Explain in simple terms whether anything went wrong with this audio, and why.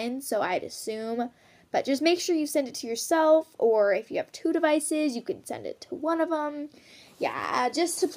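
Nothing went wrong here: no faults are audible anywhere in this recording.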